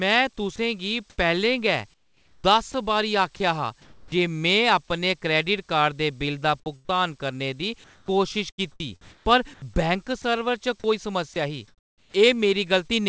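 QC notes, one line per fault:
0.56–4.12 s, sound chopped by the voice detector: speech drops out in several places, about 0.96 s in total, filled with synthetic comfort noise. Likely a voice detector gating the sender.
7.84–12.96 s, sound chopped by the voice detector: the same choppy gaps, about 1.27 s in total. The band also stops at 8 kHz, as a G.722 call path would.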